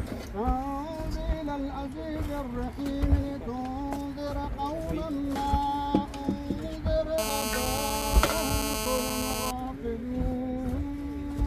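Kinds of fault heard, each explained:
GSM phone buzz: a nearby 2G phone on a call sends bursts about 217 times a second, and the audio circuit rectifies them into a steady, raspy, harmonic-rich buzz about 2 dB below the signal; mains hum sits at 50 or 60 Hz and sounds smoother.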